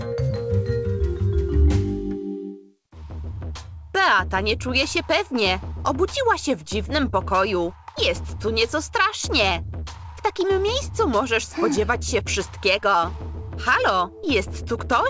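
No technical faults can be heard anywhere in the recording. The audio has come through a call path that behaves as expected, and the lack of any content above 8 kHz points to a wideband call codec such as G.722.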